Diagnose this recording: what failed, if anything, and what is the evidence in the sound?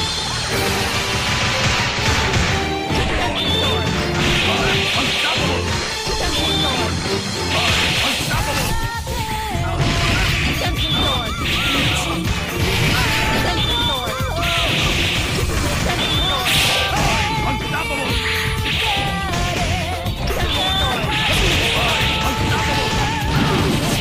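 Nothing in this recording points to a failure at any stage of the signal chain. No event in the sound calls for a diagnosis.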